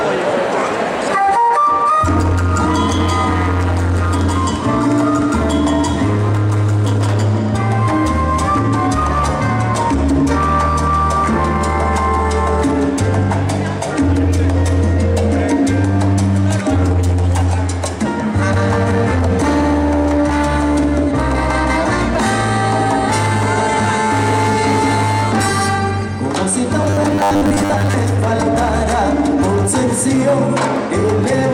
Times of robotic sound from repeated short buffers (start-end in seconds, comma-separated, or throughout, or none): 26.81-27.96